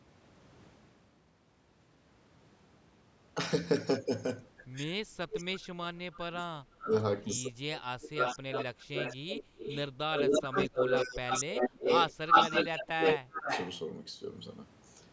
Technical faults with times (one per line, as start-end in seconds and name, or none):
5.32-5.60 echo leak
6.14-6.19 echo leak
6.22-6.91 speech suppressed in double talk
6.79-6.94 echo leak
7.76-10.68 echo leak
10.23-13.48 speech suppressed in double talk
11.27-13.79 echo leak